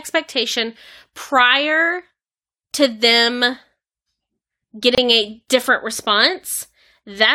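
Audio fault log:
4.95–4.98 s, gap at a join of encoded pieces: speech breaks in a 27 ms gap with codec-smeared edges before "a different", caused by untrimmed encoder delay and padding where separate encodes meet.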